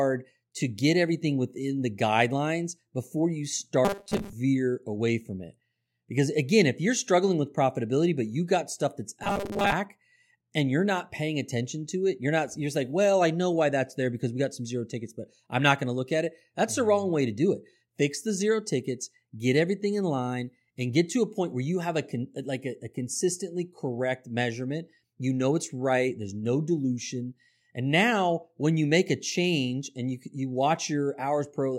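A rigid, metallic buzz at about 200 Hz enters the speech twice, from 3.85 to 4.33 s, just after "the guidelines before you" and before "away from it", and again from 9.24 to 9.72 s, right after "you got stuff that's". This is robotic sound from repeated short buffers, likely caused by audio arriving too seldom, so a slice of about 5 ms is looped through most of each stretch, stamping that fixed pitch on the sound.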